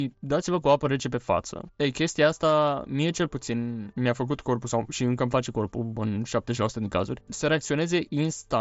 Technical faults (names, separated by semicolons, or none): none